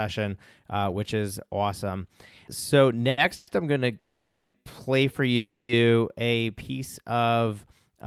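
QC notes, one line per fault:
3.09–3.19 s, short stall from a late packet: the last sound gets held and stretched for about 80 ms with a faint buzz, then carries on from the same spot with nothing lost. A packet showed up late and the jitter buffer briefly ran dry.
3.35–3.49 s, 3.99–4.56 s and 5.36–5.71 s, call audio freeze: the sound trails off as a fading buzz for 120, 550 and 330 ms. The longer two fall silent for about 240 and 190 ms before resuming on "play for", and after "to play for" on "a piece of", with nothing skipped. The likely cause is packets held up in transit emptying the jitter buffer.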